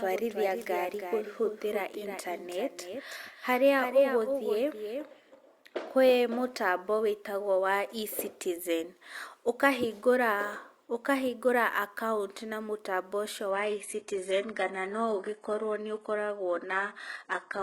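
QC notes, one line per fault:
0.00–6.18 s, doubled audio track: The speech is likely being captured a second time through a slower path, or an edit is holding two copies out of step, so a second copy of the speech plays about 5 dB under the original and roughly 300 ms behind it. The copy is full-band and dry, with no decay or room colour. It is already present when the clip opens and cuts off abruptly at 6.18 s, just before "mũtambo wĩtagwo wa".
13.51–17.62 s, adaptive stream at a lower bitrate: The connection slowed and the adaptive stream switched to a much leaner version for the final four seconds. The sound points to a drop from a full-rate AAC stream to a low-rate HE-AAC one. Nothing remains above 11.4 kHz, the treble drops away and codec artefacts rise. The change in quality is sudden, with no gap in the audio, and lasts to the end of the clip.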